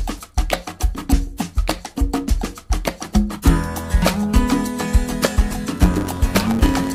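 A block size mismatch (truncated) runs from 5.79 s to the end of the audio. One stage delivers longer blocks than the next consumes, so each block's tail is discarded, producing a 100 Hz buzz at the block rate and playback about 1.09 times faster.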